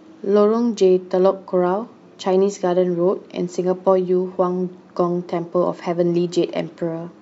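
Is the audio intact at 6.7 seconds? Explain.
Yes, the speech at 6.7 seconds is intact, with no fault at that moment.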